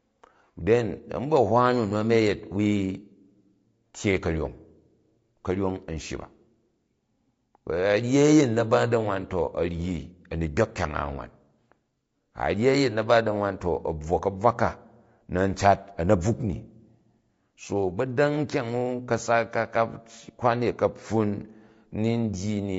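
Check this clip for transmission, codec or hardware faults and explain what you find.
One codec fault runs through the whole speech clip. The voice sounds rough and grainy throughout, with noise between the harmonics. The likely cause is low-delay AAC compression, AAC-ELD. Its short frames resolve pitch harmonics poorly. The plainly audible damage fits about 32 kbps.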